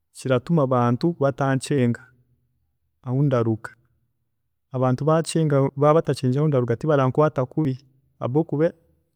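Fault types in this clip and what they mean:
Audio missing between chunks: the speech skips forward abruptly at regular points, about every 2 s, each time losing roughly 40 ms with the two sides butted together. This is likely a recorder or processor dropping samples while closing one chunk and opening the next.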